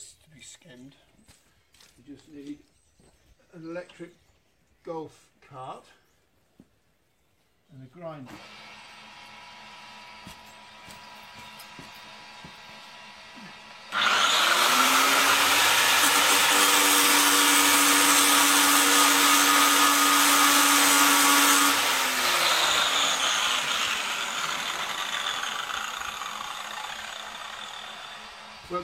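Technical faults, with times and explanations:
8.22 to 8.28 s, damaged data in a compressed stream: a brief glitch cuts through the sound for about 50 ms. Corrupted bytes reach the decoder there. It misreads those frames and loses sync. It then hunts for the next valid frame header before playback recovers.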